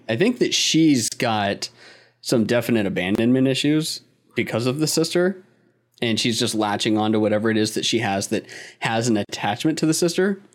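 Speech, interrupted three times by a gap at a join of encoded pieces: at 1.08 s after "I think that she's" (about 35 ms), at 3.15 s after "she's got some definite" (about 31 ms), and at 9.25 s after "has that has an" (about 43 ms). Each piece was encoded separately and spliced untrimmed, so encoder start delay and final-frame padding sit inside continuous speech. The speech then resumes where it stopped. On a waveform each gap is a narrow notch with codec-softened edges; a spectrogram shows a thin vertical blank band across all frequencies.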